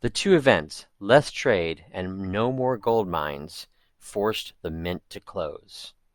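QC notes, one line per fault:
2.74 to 5.18 s, crude rate conversion: the speech takes on a gritty, inharmonic fizz that rises and falls with its louder and brighter parts. The pattern fits a 32 kHz to 48 kHz change made by repeating the nearest sample, with no filtering. That 2:3 step pattern creates tones unrelated to the speech, roughly 25 dB down. Unlike steady noise or quantisation hiss, the fizz tracks the signal's level and high content, then stops cleanly at 5.18 s.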